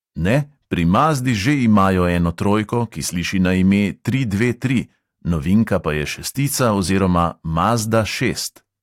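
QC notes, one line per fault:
0.94–1.89 s, 4.42–4.78 s, 5.55–5.75 s and 6.61–6.72 s, hard clipping: the speech peaks run past the level the signal path can carry, by about 3, 2, 2 and 4 dB, so their tops are sliced flat. The squared-off peaks add high harmonics, heard as crackly grit on loud syllables. On the waveform, peaks sit pinned at one ceiling. On the spectrogram, vertical smears of energy reach well above the speech bands.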